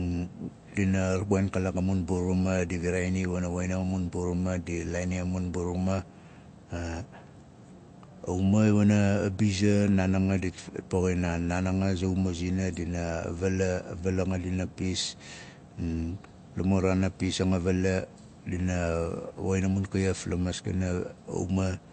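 Speech, with plainly audible MP3 compression throughout: nothing above 8.3 kHz and a watery, swirling texture, likely from an MP3 encoder starved of bits at a low rate near 48 kbps.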